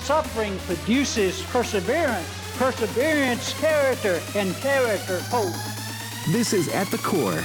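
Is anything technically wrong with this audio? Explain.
Yes. At 1.65 s and 3.28 s the sound jumps abruptly. Each is likely a dropped buffer (overrun), where audio was overwritten before being read. Roughly 10 ms vanishes at the first, a few milliseconds at the second. The edges join with no gap.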